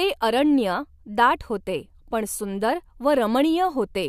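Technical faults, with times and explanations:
No technical faults detected in this speech recording.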